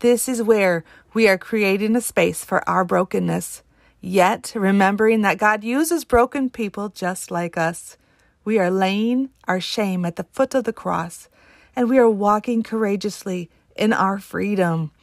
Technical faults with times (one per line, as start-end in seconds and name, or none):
none